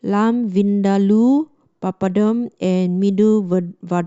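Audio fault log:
0.94–1.03 s, DAB burbling: short noise blips and level jumps in single sub-bands over the speech. Bit errors slipping past error correction corrupt samples and scale factors, so single sub-bands jump in level frame by frame. The sound points to around four frames hit.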